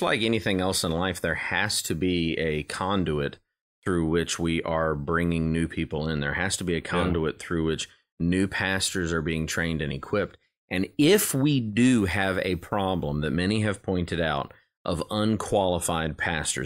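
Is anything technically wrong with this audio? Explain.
No, the speech recording shows no technical faults, with the signal path intact and nothing in the audio pointing to a problem in capture, processing or playback.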